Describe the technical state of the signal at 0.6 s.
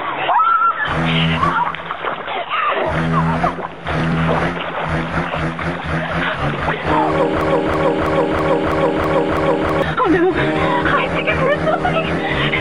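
At 0.6 s the signal is intact, with nothing to point to as a fault at that moment.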